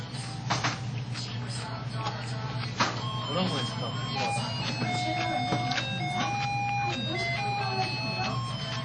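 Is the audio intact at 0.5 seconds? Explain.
No. WMA compression, likely the cause, affects the whole clip including 0.5 s: long transform blocks smear quantisation noise into a ringing, washy hiss, and nothing remains above 9.9 kHz.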